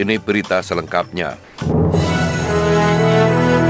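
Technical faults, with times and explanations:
1.44–1.58 s, comfort noise in place of the background: for about 140 ms the real background, sitting roughly 27 dB below the loudest passages, gives way to a flat, textureless hiss about 5 dB quieter. The sender likely judged the gap silent and stopped transmitting, so the receiver filled it with generated noise matched only in rough spectral shape. That is why the detail vanishes and the level dips until the sound resumes, all within a band ending at 8 kHz, which fits G.722 at 64 kbps.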